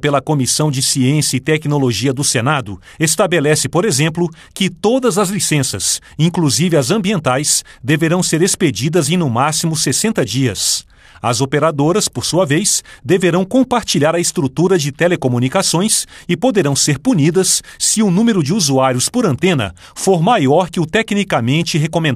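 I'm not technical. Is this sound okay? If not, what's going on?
No. From 1.00 s to the end at 22.15 s, there are faint ticks about once a second, around twenty in all. These are clock slip clicks. Likely cause: two devices keep slightly different time, so a single sample gets dropped or repeated.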